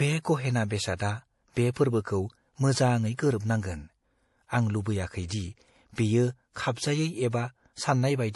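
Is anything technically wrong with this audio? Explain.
Yes. Throughout the speech there is plainly audible damage that is likely from MP3 compression, pointing to a low bitrate near 48 kbps. Weak frequency lines are dropped and flicker between frames, giving a watery, swirly texture. A spectrogram shows nothing above 11.5 kHz and speckled, patchy upper bands.

Pre-echo occurs three times: at 0.96 to 1.00 s (32 ms), between "बे गहेना" and "बे फोर्बोखौ मोजाङै गोरोबनांगोन"; at 1.71 to 1.76 s (48 ms), just before "फोर्बोखौ मोजाङै गोरोबनांगोन"; and at 3.15 to 3.19 s (35 ms), right after "बे फोर्बोखौ मोजाङै". Each time, quantisation noise sized for a sharp onset spreads back into the quiet stretch before it within the same block. You hear a brief hiss ahead of a softened attack. The waveform shows a low noise smear preceding each onset, and the spectrogram shows faint broadband fuzz leading into it.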